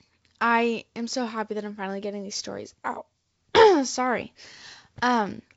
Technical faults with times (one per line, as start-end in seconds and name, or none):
none